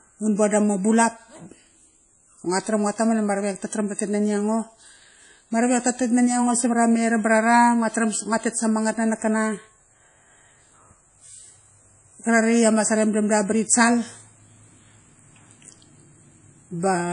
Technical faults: WMA compression

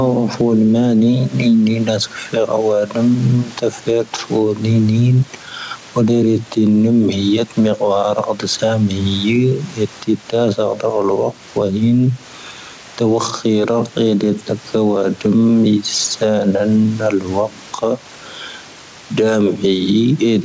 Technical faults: gain pumping

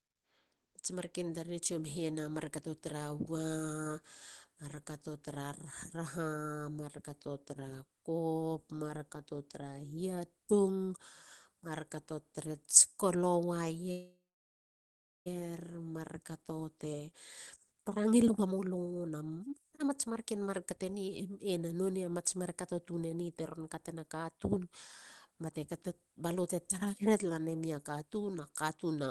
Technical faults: call audio freeze; jitter buffer speed-up

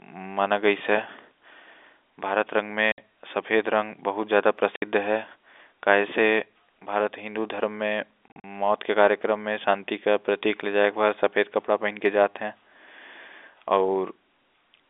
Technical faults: packet loss filled with silence

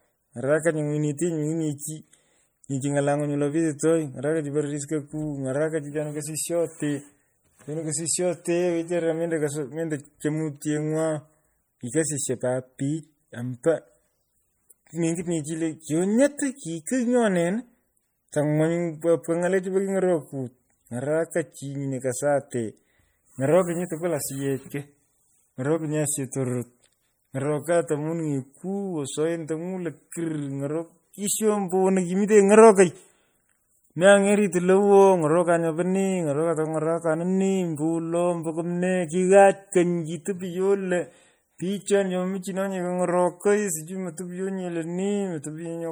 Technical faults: MP3 compression; pre-echo

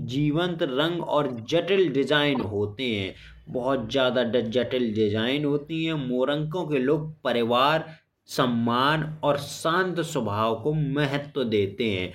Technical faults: corrupt frame decoded

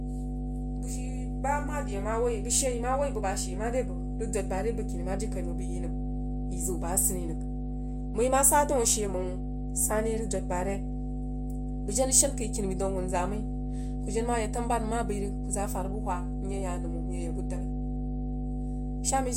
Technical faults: mains hum

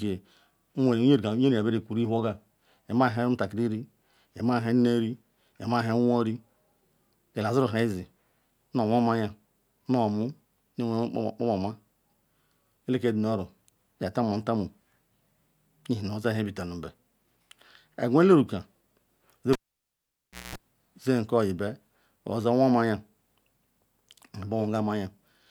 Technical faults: cable pulled and plugged in

